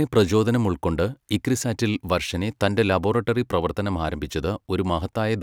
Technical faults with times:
none

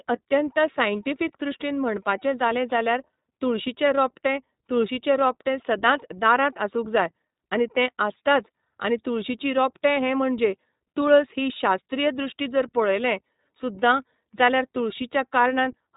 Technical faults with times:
0.00-15.96 iLBC codec

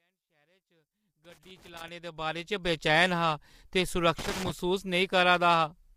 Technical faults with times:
0.00-5.96 low-delay AAC compression
1.25-1.88 loose connector crackle
4.19-4.51 loose connector crackle

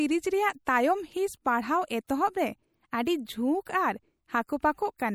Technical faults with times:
0.00-5.15 MP3 compression
0.65-0.67 pre-echo
2.07 pre-echo

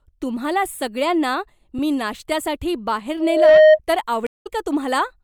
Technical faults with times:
1.78 underrun with held sample
3.20-3.79 loudspeaker feedback squeal
4.27-4.47 stream reconnect

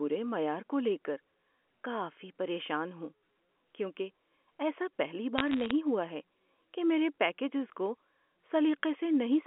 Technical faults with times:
5.38-5.71 bit errors on a digital phone line

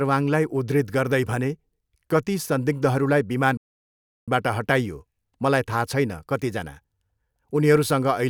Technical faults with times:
3.57-4.28 playback stall

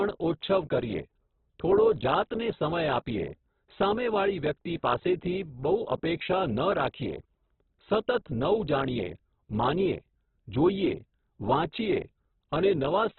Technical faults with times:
0.00-13.19 Opus compression

